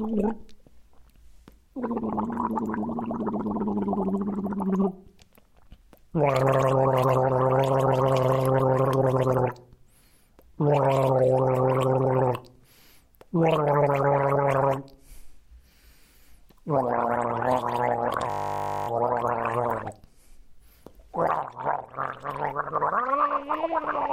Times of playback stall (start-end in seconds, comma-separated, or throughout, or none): none